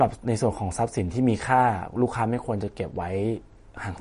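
Throughout the speech, MP3 compression damage is plainly audible, likely from a low bitrate near 40 kbps. Nothing reaches above 10.6 kHz. Weak detail flickers, sounding watery.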